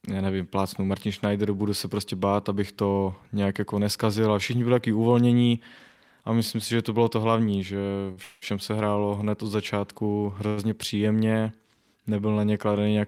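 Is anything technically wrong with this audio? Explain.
Yes, there are three timing faults, all in the speech's later half.

Short stalls from a late packet occur at 8.11–8.19 s, just after "bylo to hlavní že", and at 10.48–10.59 s, just before "příjemně nebyl na". Each time a packet arrived late, the jitter buffer ran dry, and the receiver stretched the last sound for about 54 ms and 95 ms. That sound is held unnaturally long with a slight buzz or dip, then the speech resumes without losing anything.

A call audio freeze runs from 8.23 to 8.44 s, still right after "bylo to hlavní že". It is likely caused by packets being held up in transit, emptying the buffer. The last sound is continued as a buzz or hiss for about 188 ms with no silence. The speech then picks up where it stopped, delayed rather than cut.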